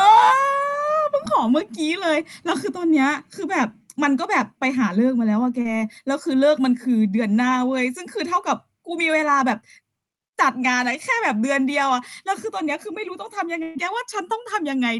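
At 5.61 to 5.67 s, short concealed packet loss: about 40 ms of the speech never reached the decoder in time, and the receiver covered the hole by extending the preceding sound for roughly 34 ms before blending back, leaving a brief smear in the speech.

At 13.63 to 13.77 s comes a burst of packet loss: around 120 ms of audio was lost in a row. The receiver held the last sound and faded it across the gap without dropping to silence, producing a held buzz or fading hiss before the speech resumes with that stretch missing.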